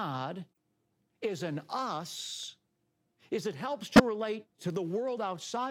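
Speech with four corrupt frames decoded. At 0.53 to 0.57 s a couple of damaged frames leave a very faint blip. At 3.94 to 4.00 s a loud burst follows. Flipped bits made the decoder misplace energy across the spectrum.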